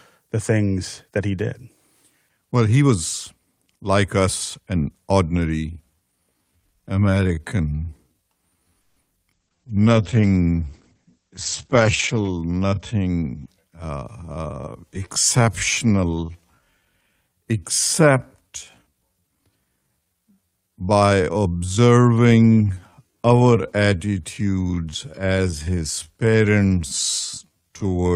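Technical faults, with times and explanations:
5.69 s to 28.16 s, time-stretched section: from here the speech suddenly drags at about 0.61 times its earlier pace while its pitch stays put. This is likely software lengthening the audio by repeating short fragments so pitch is unchanged.
9.34 s to 13.53 s, call bitrate drop: the speech turns rough, watery and muffled, losing its top end, worst for nearly 3 s. The encoder was pushed from 32 kbps to 10 kbps, coding more coarsely and narrowing bandwidth from 20 kHz to 8 kHz.
13.13 s to 14.40 s, jitter buffer speed-up: the speech briefly sounds hurried, running at 111% speed with no rise in pitch. The receiver had built up excess buffered audio and trimmed roughly 150 ms by cutting many tiny pitch-period slices in succession.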